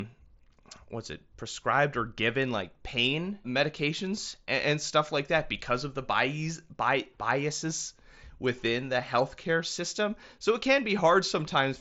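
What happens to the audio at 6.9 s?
Faint ticks are landing right around 6.9 s, part of a run of clock slip clicks that lasts from about 0.33 s to 11.77 s. They repeat roughly every third of a second, which points to two devices likely running on unsynchronised clocks about 100 ppm apart, so a single sample gets dropped or repeated each time the drift adds up. They're clearest on louder speech, even through the headset's band that tops out near 7.7 kHz.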